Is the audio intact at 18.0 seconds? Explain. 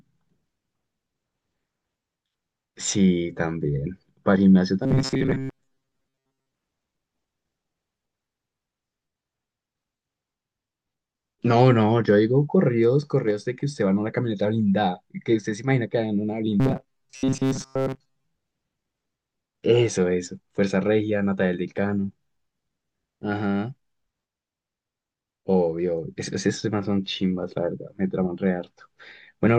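No. From 16.6 to 18.24 s, which includes 18.0 seconds, the speech turns into robotic sound from repeated short buffers: a rigid, metallic buzz fixed near 133 Hz that still loosely tracks the words. The likely cause is audio arriving too seldom, so a slice of about 7.5 ms is replayed for most of the span while real audio is skipped. Unlike a dropout, nothing goes silent.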